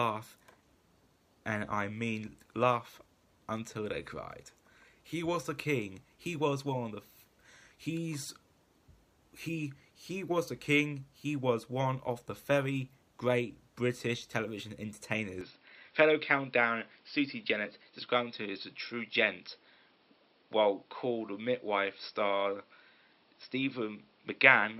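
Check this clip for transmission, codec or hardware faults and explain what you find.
One fault appears. At 15.41 s the input was likely switched to a poorer device, which passes a narrower band. From there to the end nothing comes through above 5.4 kHz, so the sound turns dull and boxy, with no gap at the switch, little change in level and a faint new noise floor.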